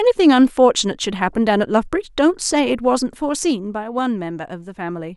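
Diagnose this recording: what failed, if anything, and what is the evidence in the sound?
A ticking, zipping texture rides on the speech from 2.94 to 4.01 s while the level falls by roughly 10 dB. This is zipper noise from the gain stage at the buffer level. The level drops in 2 dB steps, about seven per second, with no smoothing, and each jump clicks.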